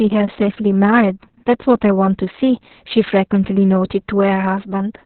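A speech clip carrying heavy Opus voice compression from start to finish. Nothing is present above about 4.3 kHz, consistent with the SILK coder in narrowband mode. The voice also sounds hoarse and faintly robotic because the excitation is coded so coarsely, which points to a very low bitrate around 6 kbps. That roughness separates it from a plain low-pass filter or telephone band-limit, which would muffle without adding grit.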